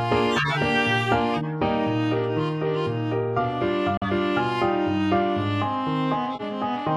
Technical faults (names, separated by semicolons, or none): corrupt frame decoded; corrupt frame muted